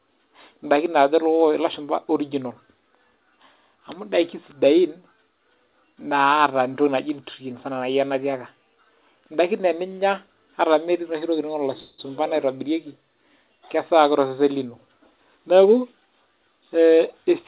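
At 11.8 s a call audio freeze likely occurred: delayed packets left the jitter buffer empty, so the receiver stretched the last sound into a short buzzy tail lasting about 0.18 s before the speech resumed where it stopped, now running that much later.

From 14.66 to 16.23 s a jitter buffer speed-up followed. With surplus audio queued, the receiver repeatedly cut short pitch-period slices, about a fifth of a second in total, so the speech plays roughly 11% faster and sounds hurried while its pitch stays unchanged, within the call path's band that ends at 4 kHz.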